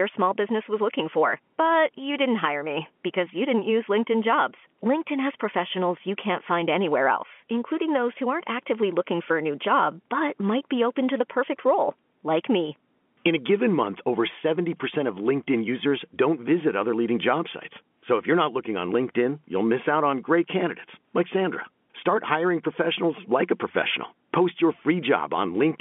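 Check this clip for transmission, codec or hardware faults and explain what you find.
No faults are present in this clip.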